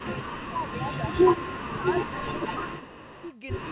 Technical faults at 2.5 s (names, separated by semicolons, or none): echo leak; speech suppressed in double talk